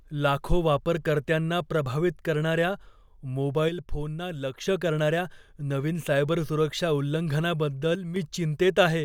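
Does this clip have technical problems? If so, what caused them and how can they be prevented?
Yes. The speech falls abruptly by about 6 dB from 3.69 to 4.67 s and again from 7.95 to 8.16 s. The likely cause is one channel drops out: with one stereo side lost, the mono sum carries only half the shared signal. Secure connectors and watch both channel meters.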